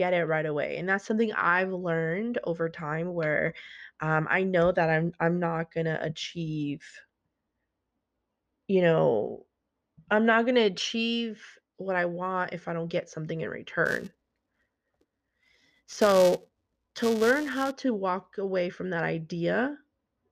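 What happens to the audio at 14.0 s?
A filter is restarting on every block, dropping its stored state and starting each block from silence. This runs from 13.86 s to 17.72 s, beginning just after "don't get something in". Each fresh start leaves a small transient, and these repeat at about 345 Hz, which fits a 128-sample block. The speech therefore carries a steady buzz at that rate, getting louder and quieter as the speech level rises and falls.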